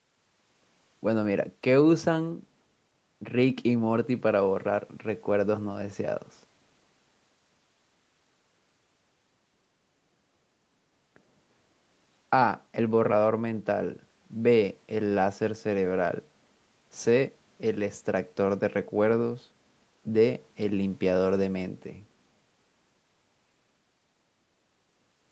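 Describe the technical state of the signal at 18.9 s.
At 18.9 s the speech is intact, with no dropout, glitch or other fault at that moment.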